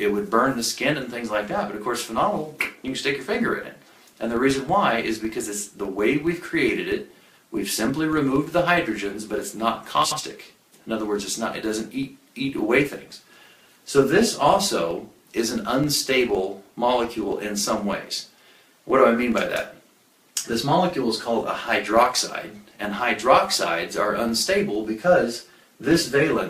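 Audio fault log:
Throughout: filter restarted on every block. The filter drops its stored state at each block boundary and starts again from silence, so every block opens with a small transient. The ticks repeat at 21.5 Hz, which fits a 2048-sample block, and blend into a low buzz that grows louder and quieter with the signal. A spectrogram shows faint vertical broadband stripes about 46 ms apart, strongest in loud passages. The waveform shows small spikes or steps at each block start.
7.28–7.38 s and 10.04–10.19 s: frames out of order. In each stretch, two neighbouring runs of frames play in swapped order. In the first swap each run covers 46.4 ms, which points to two frames per run. In the second each run covers 69.7 ms, which points to three. Each stretch sounds like a brief garbled flutter. No time goes missing. A spectrogram shows abrupt content jumps with thin vertical lines at each join, and the waveform has discontinuities at those points.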